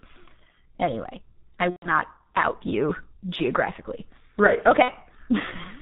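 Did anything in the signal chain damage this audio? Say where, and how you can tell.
Yes, at the codec stage. The whole recording carries heavy G.723.1 codec damage: nothing survives above 4 kHz, so the speech is muffled, and the slow-updating vocal model leaves a hoarse, rough quality with smeared consonants. That heavy coarseness fits the 6.3 kbit/s mode, where the encoder describes each 30 ms frame with very few bits and cannot follow rapid changes in the voice.

Downstream, on the network, there are two stretches of VoIP packet loss concealed by the speech codec. After "anyway i", at 1.70–1.91 s, the sound is stretched and fades, a gap of about 120 ms that fits four lost frames. After "you geographically right", at 4.82–4.92 s, a shorter 60 ms dropout does the same. In each, the decoder replayed its last pitch and filter at falling gain, and the speech takes a moment to recover once real frames return.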